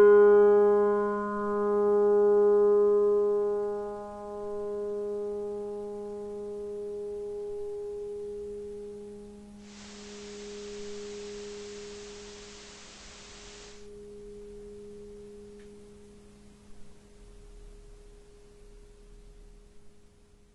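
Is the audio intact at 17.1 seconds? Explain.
Yes, at 17.1 seconds the audio is intact, with no dropout, glitch or other fault audible at that moment.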